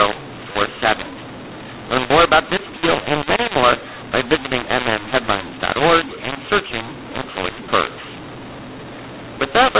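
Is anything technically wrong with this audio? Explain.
Yes. A mu-law and A-law mix-up runs throughout the speech: telephone audio coded with the mu-law curve is decoded as A-law. Each 8-bit code maps to the wrong level, so loudness is scrambled, the quietest samples rise well above silence, speech turns harsh and distorted, and pauses fill with noise. The top of the band stops near 4 kHz, which fits 8 kHz telephone coding.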